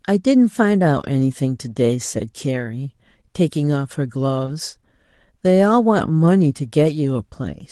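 Around 0.99 to 1.05 s, two packets were lost and rebuilt from error correction: the decoder played the low-bitrate copies carried in the following packets, so 40 ms of speech sounds rougher and noisier, without a gap. At 4.45 to 4.49 s, a short concealed packet loss occurs. About 20 ms never arrived in time, and the receiver extended the preceding sound before blending back, which produces a brief smear or wobble. Within that stretch, from 4.47 to 4.49 s, one packet was likewise rebuilt from error correction and sounds coarse for about 20 ms. From 6.21 to 6.27 s, two more packets were lost and rebuilt from error correction, again giving 40 ms of grainier, noisier audio. All of this sits on an Opus call path whose coding noise and roll-off above 12 kHz fit a bitrate around 32 kbps.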